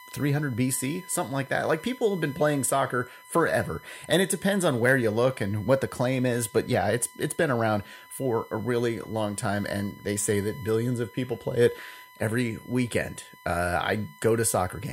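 Running under the speech for the whole clip there's a steady USB whine, a fixed 1 kHz tone sitting roughly 25 dB below the talking. That's the bus pulling current in its 1 ms frames and leaking it into the audio through power or ground.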